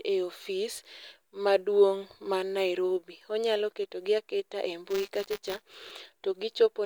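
From 4.90 to 5.91 s, buffer tearing adds a steady 200 Hz robotic buzz: a tiny slice of each 5 ms buffer replays audio about 20 ms old. Unlike random dropout clicks, it is periodic and sounds only with signal.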